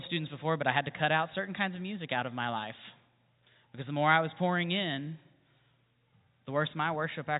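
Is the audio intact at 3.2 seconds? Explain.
Yes, the audio is intact at 3.2 seconds, with the speech carried cleanly through the G.711 telephone coding and its band limit near 3.8 kHz.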